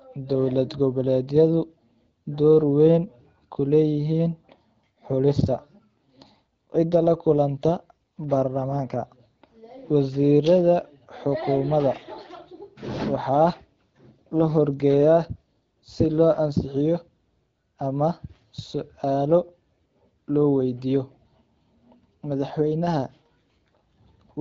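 No technical faults can be heard in this speech, which carries the band-limited character of AMR wideband (HD Voice) coding, with audio up to about 7 kHz and the mild coding texture of a mid-range rate, likely around 12.65 kbit/s.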